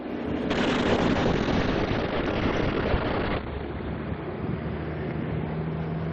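A call bitrate drop starts at 0.51 s and runs to the end. Coarser coding, consistent with a fall to around 7 kbps, cuts content above 6 kHz, leaving the sound rough and muffled.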